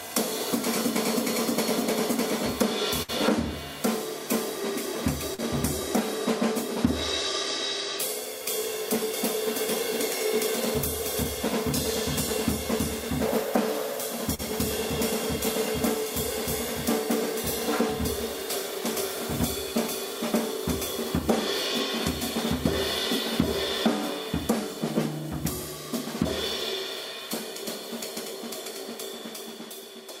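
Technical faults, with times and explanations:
3.02 to 3.10 s, burst of packet loss: about 60 ms of audio went missing in one run, and the receiver filled roughly 58 ms of it by stretching out the last sound it had and letting it decay, so a tonal sound turns into a held, dimming buzz and a noisy one into a fading hiss before the sound picks up later with the middle gone. The audible fade-out over a gap this long sets it apart from the briefer concealments.
5.34 to 5.40 s and 14.34 to 14.41 s, short concealed packet loss: each time about 40 ms failed to arrive in time, and the receiver covered the hole, roughly 40 ms at 5.34 s and 43 ms at 14.34 s, by continuing the preceding sound from its pitch, or as shaped noise, then blending back into the real signal. The result is a quick smear or wobble rather than a decaying hold, and a short transient can vanish inside it.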